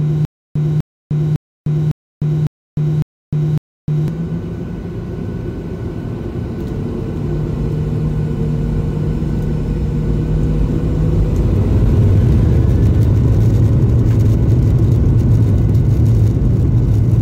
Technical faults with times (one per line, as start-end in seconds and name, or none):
0.00-4.08 stutter with silent gaps